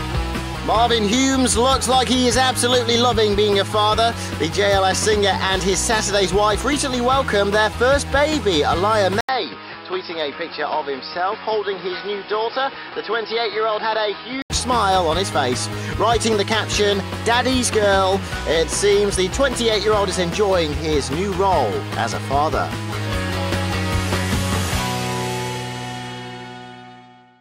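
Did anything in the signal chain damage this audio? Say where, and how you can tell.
Yes. From 9.21 to 14.5 s the sound turns dull, with nothing above 5.4 kHz, a few dB quieter and over a different noise floor, after an 80 ms silence. This is likely an input switched to a poorer device; a codec bandwidth drop would keep the original noise and level.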